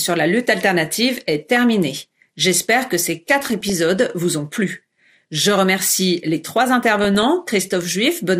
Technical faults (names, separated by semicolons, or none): MP2 compression; DAB burbling